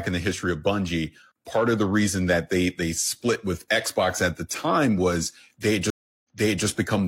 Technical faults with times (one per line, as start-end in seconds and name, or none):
5.90-6.67 stream reconnect